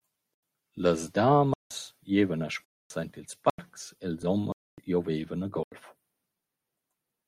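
Speech with six blocks of digital silence, at 0.34–0.43 s, 1.54–1.71 s, 2.65–2.90 s, 3.50–3.58 s (right after "aint ils"), 4.52–4.78 s (just before "giovaivan a") and 5.63–5.72 s (right after "giovaivan a"). Each one cuts abruptly to silence and back. The lengths are about 85, 171 and 256 ms, exact multiples of one unit, which fits output buffers of 4096 samples or multiples of that going unfilled. At 4.23 s there is an overlap between stream segments. About 10 ms of audio is removed where two segments' time stamps overlap, so the waveform jumps forward. Unlike the silence blocks, this leaves no hole, only a tiny skip.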